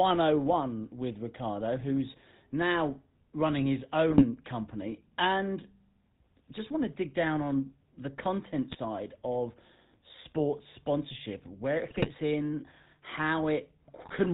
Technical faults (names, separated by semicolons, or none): GSM full-rate codec; GSM bit errors